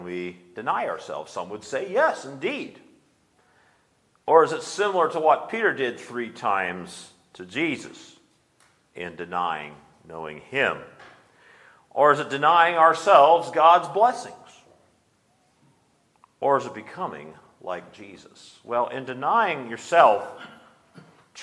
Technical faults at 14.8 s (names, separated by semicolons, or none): none